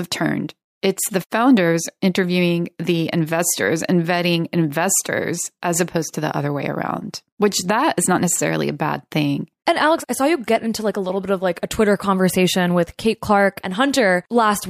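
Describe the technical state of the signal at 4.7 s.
At 4.7 s the speech signal is intact, with no audible fault at that point.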